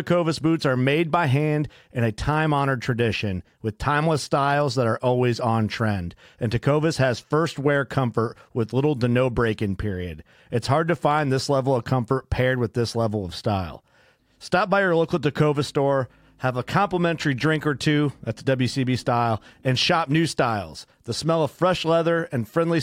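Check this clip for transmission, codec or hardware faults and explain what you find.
Nothing to report: no transmission, codec or hardware faults are audible anywhere in this speech.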